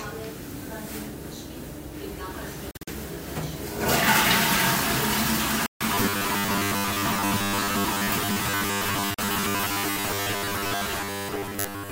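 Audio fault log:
2.71 to 2.88 s, 5.66 to 5.81 s, 9.14 to 9.19 s, Bluetooth dropout: abrupt silent holes (choppy at 2.71 s, solid 0.14 s at 5.66 s, brief 9.14 s), sound resuming further on; likely packets missing their deadline.
5.95 s to the end, robotic sound from repeated short buffers: a rigid, metallic 100 Hz buzz replaces most of the sound, likely from a 10 ms buffer being replayed while fresh audio is skipped.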